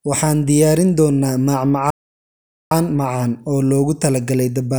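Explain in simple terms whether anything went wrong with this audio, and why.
Speech cuts out at 1.90 s and stays silent for about 0.8 s until 2.71 s. That's a playback stall, likely the player running short of data.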